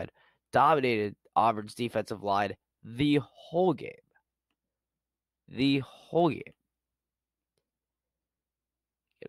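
Speech with clock slip clicks running from 0.14 s to 9.23 s, a faint tick every 70 ms or so, likely a one-sample slip from unsynced clocks drifting around 300 ppm.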